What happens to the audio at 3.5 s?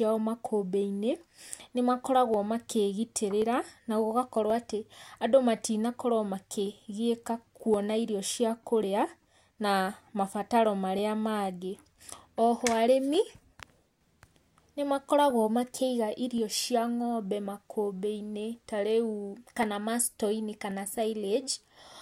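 At 3.5 s the speech carries one of a steady run of small clicks that tick through the clip about every 1.08 s, from 0.18 s to 21.79 s, some twenty in all. These are clock drift buffer slips. The likely cause is two devices running on separate clocks that disagree by a few hundred parts per million. The buffer between them slowly drifts until a short block, on the order of fifteen samples, is dropped or repeated, leaving a tiny discontinuity that clicks.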